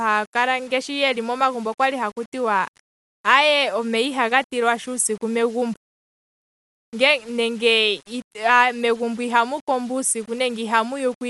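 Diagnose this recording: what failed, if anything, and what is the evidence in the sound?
The sample-format conversion stage failed. Grainy distortion runs through the whole clip and changes with the speech. Quiet passages turn gritty. The error sits roughly 30 dB below the signal. The likely cause is low bit depth without dither. Rounding fits about 7 bits, so the error follows the waveform.

The codec stage also failed. The speech sounds dull throughout, with nothing above 11.4 kHz. A rough, fluttering noise surrounds voiced tones, and the damage is plainly audible. The likely cause is Dolby Digital compression at a bitrate near 64 kbps. The encoder narrowed the band. The decoder filled unfunded lines with noise.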